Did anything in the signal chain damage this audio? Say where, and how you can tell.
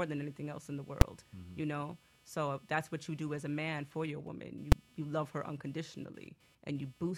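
Yes. Computer activity noise runs through the whole clip: a buzz of roughly 300 pulses a second, around 30 dB below the speech, coming from the analogue wiring's shared ground. It follows the computer's activity rather than the speech, which sets it apart from ordinary hum.

Invalid numbers at full scale produce two single bangs, at 1.01 s and 4.72 s, each a block of about 5 ms. This happened in a processing stage, where a calculation produced infinite or invalid values that were forced to maximum amplitude. A dropout would leave a silent gap, but these blocks sit flat at one extreme value, far beyond the speech peaks, and are too short to be heard as separate start and end pops.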